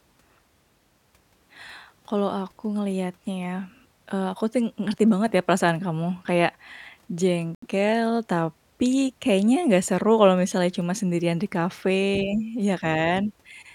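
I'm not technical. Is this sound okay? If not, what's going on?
No, there's a brief dropout. At 7.55 seconds the speech cuts to silence for about 76 milliseconds, then carries on. That's likely a Bluetooth stall: wireless interference delayed the audio, the headphones ran out of sound to play, and paused until it arrived.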